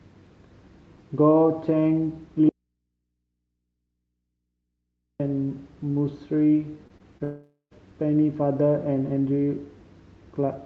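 From 2.49 to 5.20 s the speech is lost for about 2.7 s in an audio dropout to a faint residue. The wanted signal was most likely cut off upstream while the path after the break stayed live, so the gap does not go fully dead. Only mains hum from the open input is left, roughly 55 dB below the speech. The sound stops and restarts abruptly, with none of the gentle decay of a pause or fade.

Next comes short concealed packet loss at 6.87, 6.98 and 7.18 s. Each time about 20 ms of the call failed to reach the decoder in time. The receiver covered each hole by extending the previous sound for roughly the same length, then blended back into the real audio. Each event is heard as a brief smear or wobble, and the sound that should have occupied those 20 ms is missing.

Immediately after, from 7.24 to 7.73 s, a long network dropout removes about 0.48 s, likely because a run of packets never arrived. 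Concealment again continues the last sound, but it fades as a buzz or hiss over most of the gap and ends in about 0.1 s of silence. The speech then resumes further on with that stretch simply missing.

Throughout, the audio is band-limited at 8 kHz, consistent with the Opus call codec running at a modest bitrate.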